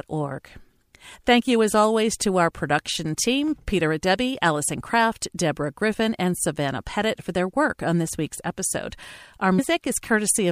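Compressed frames skipped at 0.93 s and 9.58 s: missing or rejected frames make the sound jump ahead, about 50 ms then about 150 ms, each join a brief smeared blip.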